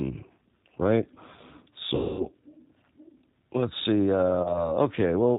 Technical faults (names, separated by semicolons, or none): G.729 codec; VoIP packet loss concealed by the speech codec